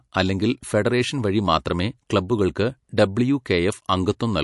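Speech runs throughout with plainly audible MP3 compression damage, likely from an encoding whose sound fits a low bitrate of around 48 kbps. The treble stops dead at 11.3 kHz, which on a spectrogram appears as a flat ceiling with empty space above. Below it, weak frequency lines drop in and out between frames, leaving scattered holes and blotches. The result is a watery, swirly texture, with sibilants turning metallic and consonant onsets smeared.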